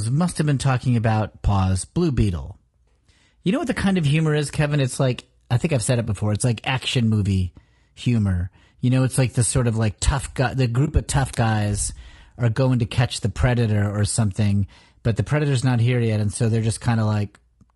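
Low-delay AAC compression runs throughout the speech, which sounds rough and grainy with noise between the harmonics. This is likely from AAC-ELD's short frames, at a rate that points to about 32 kbps.

AAC frame loss with muting occurs at 10.85–10.89 s, just before "of tough guys are". The decoder zeroed about 20 ms, fitting a single lost frame, so the sound fades out and back in, leaving a brief dip.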